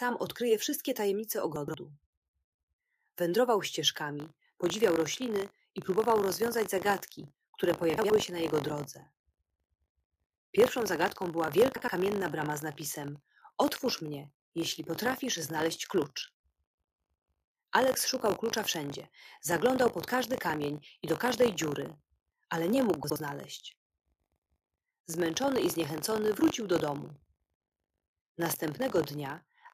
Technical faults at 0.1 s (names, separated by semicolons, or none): none